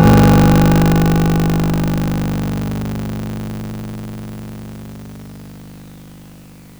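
Buffer tearing runs throughout this music clip as a robotic 50 Hz buzz wherever sound plays. The program writing the ring buffer and the hardware reading it have slipped, so roughly a third of each 20 ms period repeats audio about 40 ms old, hard-joined on both sides.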